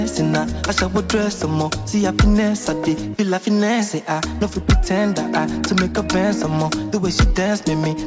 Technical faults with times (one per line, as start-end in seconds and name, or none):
none